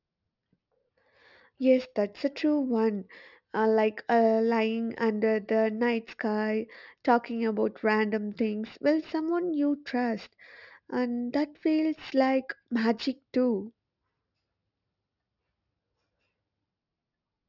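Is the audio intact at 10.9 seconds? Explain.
No. Aliasing runs through the whole speech clip, including 10.9 s: the rate was cut without filtering, so content above 6 kHz folds back as false, unrelated tones about 30 dB down. Sibilants turn gritty and metallic, unlike clean low-pass dullness.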